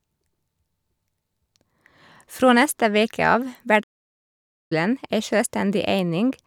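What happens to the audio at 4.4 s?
At 4.4 s the speech is inside a playback stall running from 3.83 to 4.72 s, nearly 0.9 s of silence. The sound halts mid-flow, most likely because the player ran short of data or was blocked, rather than giving the brief click-like gap of a dropout.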